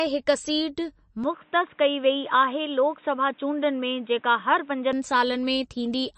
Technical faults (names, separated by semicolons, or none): MP3 compression; input switched to a poorer device